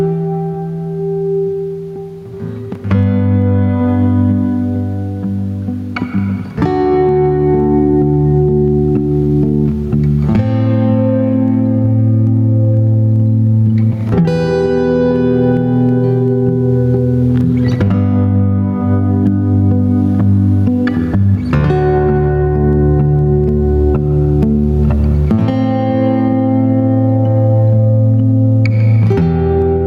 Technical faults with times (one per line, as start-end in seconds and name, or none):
0.00-29.86 gain pumping